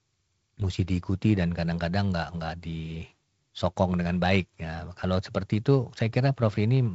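No technical faults detected.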